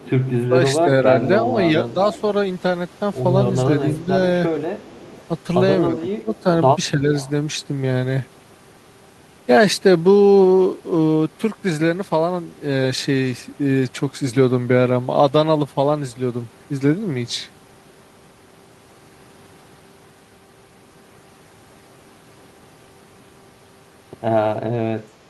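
A speech recording from a call, in which the far end's echo canceller likely failed to remove its loudspeaker pickup, producing echo leak: a delayed copy of the talker returns about 0.32 s late at 0.00–0.32, 2.12–2.21, 4.80–5.22 and 6.34–7.30 s, mostly about 20 dB below the direct speech and fainter, about 30 dB down, in the third stretch. The same canceller likely mistook simultaneous talking for echo, giving speech suppressed in double talk: the talker dips in brief patches at 0.49–1.98, 3.99–4.11 and 5.89–7.13 s, by a few decibels at first and by as much as about 10 dB in the last, overlapping the final echo.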